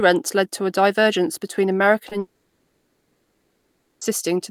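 Short concealed packet loss at 2.09 to 2.13 s, right after "to a divergence between". About 20 ms of the incoming audio failed to arrive in time, so the receiver stretched the preceding sound to cover the gap, continuing its pitch where it was voiced or padding with shaped noise where it was not, then blended back into the real signal. The result is a brief smear or wobble, and a short consonant there may be swallowed.

Long network dropout from 2.19 to 4.03 s. For roughly 1.8 s the original audio stops and what is heard is a synthetic continuation of the last sound, a fading buzz or hiss, with about 190 ms of near silence within the stretch, before real audio resumes at 4.03 s. The sound that belonged to that span never returns. The likely cause is a sustained interruption in packet delivery, with the receiver concealing the gap as it drained.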